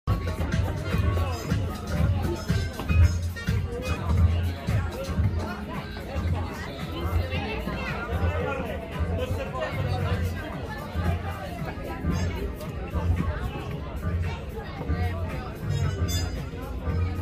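No technical faults are audible at any point in the recording.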